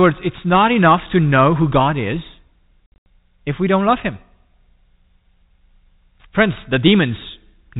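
From 2.87 to 3.06 s, just before "if we don't love", packet loss filled with silence leaves hard-edged gaps. 160 ms vanishes, which fits 20 ms packets.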